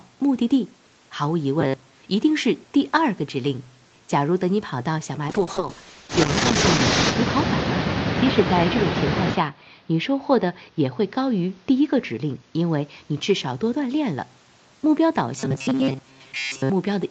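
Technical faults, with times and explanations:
1.61–2.02 s and 15.39–16.70 s: robotic sound from repeated short buffers. The sound turns into a rigid, metallic buzz at 134 Hz. That pitch fits a slice of about 7.5 ms played over and over. The likely cause is audio arriving too late, with the player looping its last short buffer to fill the gap. Most of each stretch is these repeats, so the real audio in between is skipped.
5.28–14.71 s: call bitrate drop. The Opus encoder falls from 32 kbps to 7 kbps and stays at its lowest for 1.87 s before recovering. With so few bits, the codec describes the sound far more coarsely. The result is rough, watery and muffled, with less detail than the 32 kbps stretches on either side. The call's bandwidth estimate fell, and the encoder was told to cut its rate.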